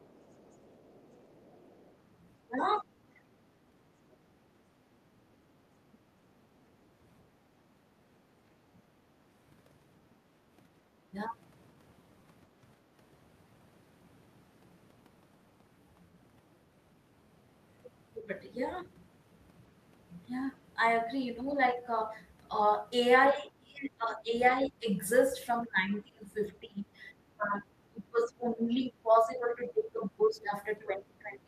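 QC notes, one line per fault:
0.0–1.94 s and 4.12–4.16 s, other side's voice leaking through: a faint second voice sits far under the talker, around 35 to 40 dB down, a longer stretch at the start and then a brief scrap. Likely loudspeaker echo the canceller didn't fully remove.
2.45–3.38 s, 23.33–24.86 s, 25.63 s to the end, speech suppressed in double talk: the talker's level dips hard, by roughly 20 to 25 dB at worst, for about half a second, then about a second, then a long stretch to the end. Likely the canceller ducking everything while both sides talked at once.
7.67–7.72 s, background gated by the echo canceller: the room tone drops by about 7 dB for about 50 ms, then returns. This is the canceller clamping the mic while the loudspeaker was playing, then letting go.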